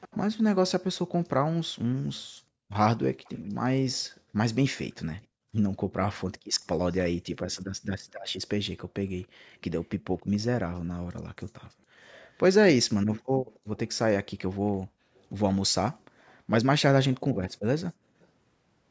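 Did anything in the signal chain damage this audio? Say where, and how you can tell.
Yes. An echo leak in the call processing: a faint copy of the speech trails it by about 279 ms at 0.01 to 0.17 s, 3.24 to 3.48 s, 5.23 to 10.22 s and 12.36 to 18.27 s, roughly 20 to 35 dB down. The likely cause is a far-end loudspeaker whose echo canceller passed residual pickup back.

The background is gated by the echo canceller, also in call processing. The room sound dips by up to about 40 dB in brief patches between 2.26 and 5.52 s, at 9.28 to 9.51 s, between 14.87 and 16.15 s, and at 17.94 to 18.19 s, as the canceller pulls the microphone down and releases it.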